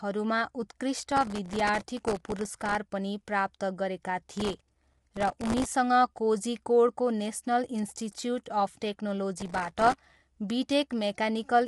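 Throughout, the speech is likely coded with low-delay AAC compression (AAC-ELD) at a rate that fits about 32 kbps. That leaves plainly audible codec damage and nothing above 11.6 kHz.

From 0.99 to 2.75 s, just before "पनि प्राप्त गरेका", processor overload crackle begins. An overloaded processor repeatedly misses buffers of well under a millisecond, replaying old audio, which is heard as gritty crackle. It returns from 4.33 to 5.74 s, just after "पनि प्राप्त गरेका", and again from 9.37 to 10.18 s.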